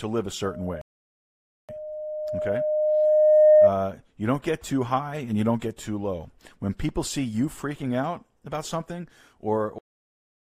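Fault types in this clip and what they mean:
loudspeaker feedback squeal: The microphone is picking up the loudspeaker it feeds, and at 612 Hz the loop gain rises above one, so that frequency keeps reinforcing itself. In this clip a pure 612 Hz tone enters at 0.44 s and swells over roughly two seconds until it sits about 15 dB above the speech. It holds there as a piercing whistle until the loop is broken at 3.74 s.
rebuffering stall: The player used up the audio it had downloaded and had to wait for more before it could carry on. From 0.81 s to 1.69 s everything drops to silence, including the feedback tone that is still building. This adds 874 ms of dead air. Playback then resumes exactly where it stopped, so nothing is skipped, but the clip runs longer than its content.
cut-off end: The final buffers were never written out, so the recording stops before the sound has finished. At 9.78 s the speech breaks off mid-sound and falls straight to digital silence, with no natural decay or fade. 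The last fraction of a second of the file is empty, and the clip ends abruptly on a truncated fragment instead of a completed sound.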